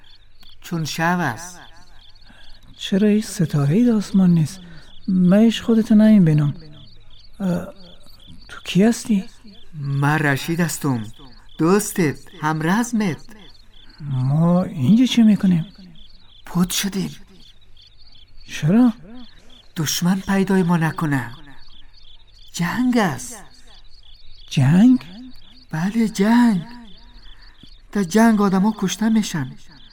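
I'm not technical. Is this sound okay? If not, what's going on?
Yes, there are no faults.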